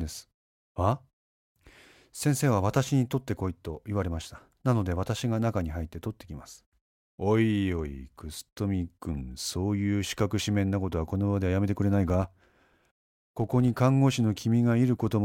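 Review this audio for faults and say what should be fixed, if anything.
From 12.06 to 13.71 s there's a filter restarted on every block: it drops its state and starts each block from zero, so every boundary kicks a little transient that adds up to a 50 Hz buzz riding the speech level. Keep the filter's state across blocks rather than resetting it each time.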